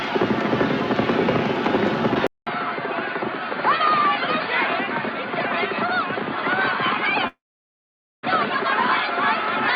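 At 2.27 s the sound cuts out for about 200 ms and returns duller and boxier, roughly 5 dB quieter, with a new background hiss sitting around 30 dB under the signal. This is most likely an input switched to a poorer device, one with a narrower band and its own noise. On a spectrogram everything above 4.8 kHz vanishes from that point to the end. The waveform shows a brief flat gap, then a lower envelope with a raised noise floor between sounds.

From 7.27 s to 8.25 s there is a long network dropout, likely caused by roughly 960 ms of audio never arriving. The receiver briefly stretches the last sound into a fading buzz or hiss, then leaves about 860 ms of silence before audio resumes, with that stretch simply gone. On a waveform this appears as a short decaying tail and then a flat line. The spectrogram shows a smeared, fading band followed by an empty block.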